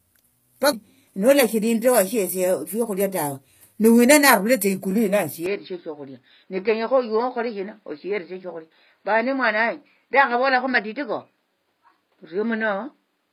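It's a speech recording, and the treble is off from start to finish. The codec damage is plainly audible: the top end has that synthetic, copied-up quality where harmonics don't line up, and everything stops around 15.5 kHz. That points to HE-AAC compression, likely v2 at something like 24 kbps, where only the lower spectrum is really coded and spectral band replication fakes the highs from lower bands under a coarse envelope. Then at 5.46 s, running to the end, the input likely switched to a poorer device: the band suddenly closes down to nothing above 5.2 kHz, so the sound goes dull and boxy. There's no gap at the switch and the level stays about the same, but a new noise floor comes in roughly 50 dB under the signal. That's the second device's own background and tone taking over.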